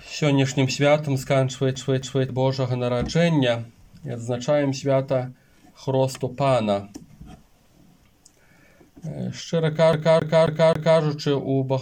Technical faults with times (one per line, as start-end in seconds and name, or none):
1.75-2.29 CD stuck on one turn
9.93-11.00 CD stuck on one turn